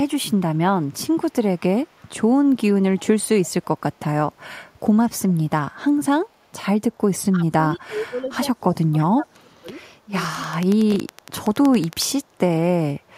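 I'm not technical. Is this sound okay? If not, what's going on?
No. There are four problems in this speech recording.

Echo leak: faint delayed copies of the voice, about 325 ms late, appear at 1.97 to 2.08 s, 3.43 to 3.65 s and 8.99 to 9.04 s, likely from a speakerphone's echo canceller letting sound through.

Speech suppressed in double talk: the voice dips at 7.32 to 7.43 s, 7.60 to 8.31 s and 8.62 to 9.67 s, likely because both sides talked at once.

Train of clicks: a steady ticking, about 11 clicks per second and some twenty in all, runs from 10.35 to 12.03 s, likely caused by electrical interference or a faulty connection or power supply.

Chunks out of order: at 10.92 to 10.96 s, a tiny 20 ms slice of sound plays one step late, producing a brief jumbled moment.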